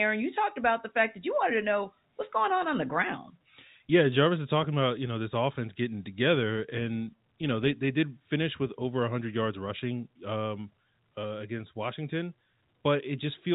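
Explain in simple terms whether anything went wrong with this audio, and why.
Nothing went wrong with this speech recording. It has the slightly narrow, boxed-in sound of an ordinary landline call, because G.711 telephone coding keeps nothing above 4 kHz, and any faint graininess it adds rises and falls with the speech.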